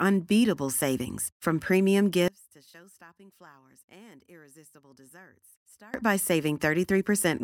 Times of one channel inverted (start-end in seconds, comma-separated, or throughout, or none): 2.28-5.94